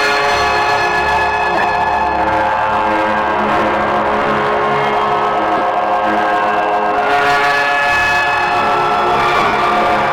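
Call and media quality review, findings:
Hard clipping, throughout: peaks flattened by an overdriven stage, about 10 dB too hot, with roughly a tenth of samples cut. The flat tops add high harmonics, so every loud moment in this everyday-sound clip carries a harsh, crackly fuzz.

Lost LE Audio frames, 1.55–1.65 s, 5.57–5.61 s, 9.36–9.53 s: LC3 concealment replays the last spectrum with scrambled phase, smearing tones into noise. The 9.36 s gap loses about 120 ms over 165 ms, longest stretch near 50 ms, consistent with 7.5 ms frames.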